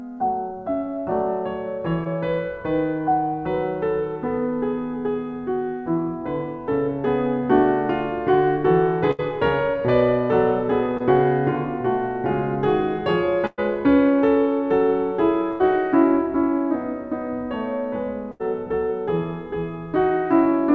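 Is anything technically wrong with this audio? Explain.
Yes. The music has two kinds of packet-loss fault, heard through a call codec whose band stops at 8 kHz, consistent with G.722.

Short concealed packet loss occurs at 2.04–2.07 s and 10.97–11.02 s. About 20 ms of audio never arrived each time. The receiver extrapolated the preceding sound for 14 ms and 25 ms, then crossfaded back into the real audio. Each is heard as a tiny smear or wobble in the music. On a spectrogram the harmonics briefly blur or flatten. The waveform shows a short, overly regular stretch.

Bursts of packet loss occur at 9.11–9.20 s (about 60 ms missing), 13.46–13.60 s (about 120 ms), 15.52–15.62 s and 18.32–18.42 s (about 80 ms each). The receiver held the last sound and faded it over roughly 70 to 120 ms, so pitched content becomes a sustained buzz and noisier content a decaying hiss. The music then jumps ahead with that stretch gone. 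At 13.5 s the fill drops to silence for about 10 ms. A spectrogram shows frozen, fading horizontal bands. The waveform shows a tapering repeated pattern before the music resumes.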